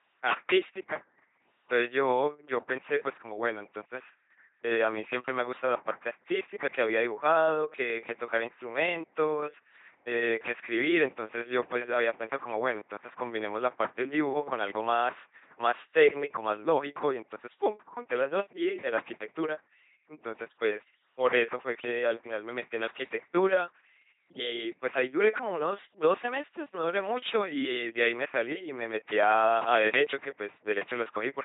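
From start to finish, the speech passes through an LPC-10 vocoder, and the damage is heavy. Each moment is rebuilt from a short filter driven by either a pulse train or noise, never a mix. Voiced sounds come out as a flat, mechanical buzz. Where the voiced or unvoiced choice goes wrong, buzz and hiss swap places. Nothing remains above 3.8 kHz. The thin, robotic result fits a 2.4 kbit/s vocoder.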